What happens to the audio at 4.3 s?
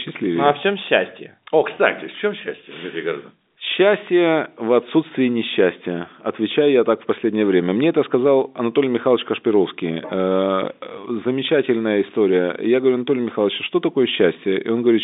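Nothing goes wrong at 4.3 s: the speech carries on intact through the ordinary telephone band.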